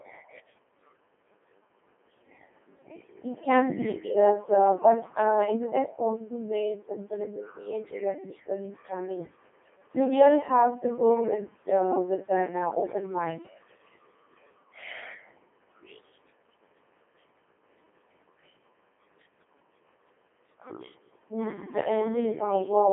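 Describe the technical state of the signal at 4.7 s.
At 4.7 s the speech is running through a Codec 2 vocoder, as it does across the whole clip. Only pitch, voicing, energy and a spectral envelope survive, rebuilt from sine waves, so it sounds buzzy and robotic, fitting a 2.4 kbit/s mode. A spectrogram shows neat harmonic stripes between 200 Hz and 3.4 kHz with nothing above 3.5 kHz.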